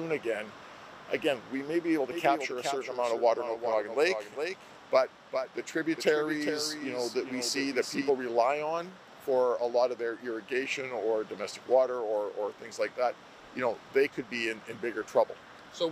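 From 2.11 to 8.09 s there's a doubled audio track: a second copy around 400 ms behind, roughly 10 dB quieter, likely from a slower parallel capture path.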